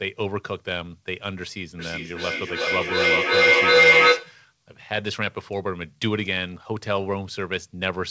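Feedback howl runs from 1.79 to 4.41 s in this speech recording, peaking about 11 dB above the speech. Two devices in one room share the call, so sound from one loudspeaker reaches the other's microphone and returns louder on each pass. The repeats grow instead of decaying, narrowing to a tone near 2 kHz that pulses roughly every 400 ms, the loop's round-trip delay. Throughout, nothing sits above 8 kHz, which fits a G.722 call codec.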